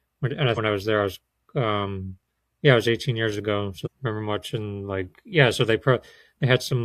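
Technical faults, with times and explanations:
0.53–0.58 s and 3.82–3.88 s, damaged data in a compressed stream: two short bursts, about 50 ms and 60 ms long, just before "I was there I" and just after "years ago". Corrupted bytes made the decoder misread those frames and lose sync until it found a valid header, so each comes out as a brief glitch in the speech.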